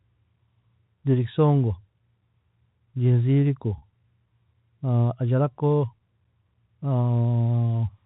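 At 3.78 s about 40 ms of the stream went missing, which fits two lost 20 ms packets, and the receiver filled the gap by looping the last pitch period. This packet loss with pitch repetition, ending at 3.82 s, leaves the speech briefly held and buzzy.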